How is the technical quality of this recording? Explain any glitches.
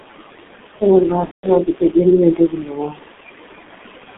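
The technical quality is poor. Heavy low-bitrate codec damage, noise suppression and one concealed dropout degrade the speech.

G.723.1 codec: Throughout, the speech is muffled and hoarse, with smeared consonants. The band runs only 200 Hz to 3.6 kHz, and the coarse coding points to roughly 6 kbit/s.

Noise suppressor artifacts: Throughout, the room noise drops by about 17 dB in gaps and swells under speech.

VoIP packet loss concealed by the speech codec: From 1.25 to 1.54 s, about 180 ms of audio was lost. The decoder extrapolated from its last pitch and filter, then muted the sound from the third lost frame onward, and the voice stays distorted briefly afterward.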